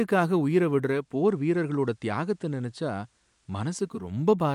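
From 0.83 to 4.18 s, digital radio blending to analogue: a 0.42 s cross-fade to FM drops about 1 dB and adds faint hiss.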